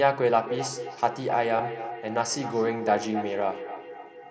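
From 0.37 s to the end, feedback echo between two devices returns the speech roughly every 0.3 s at up to about 9 dB below it, showing as repeated, thinning copies on a spectrogram.

Concealed Bluetooth headset packet loss appears at 1.59 s (7.5 ms), a single loss that is nearly hidden, and 2.77–2.80 s (22.5 ms), where the waveform is patched with repeated cycles, leaving a brief buzzy stripe and a slight warble.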